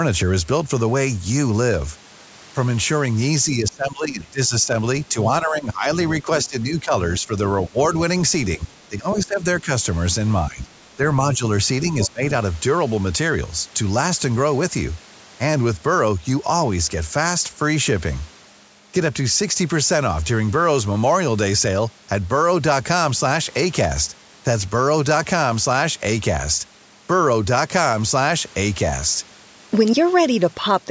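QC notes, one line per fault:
3.5–7.78 s, 8.57–9.69 s and 10.49–12.22 s, speech suppressed in double talk: the echo canceller likely lost track of which signal was its own talker and which was loudspeaker echo while both sides spoke, so it turned the microphone path down. The talker's speech dips and thins out in pieces, by around 20 dB at its deepest in the first and third stretches and around 15 dB in the second, for about two seconds in total across the first span and about half a second in each of the others.
9.11–9.24 s and 12.0–12.09 s, other side's voice leaking through: the echo canceller likely failed to remove all of the far-end sound coming from the loudspeaker into the microphone. Short scraps of a second voice come through, roughly 15 dB below the talker's speech the first time and roughly 10 dB below the second time. Both leaks fall inside the suppressed stretches.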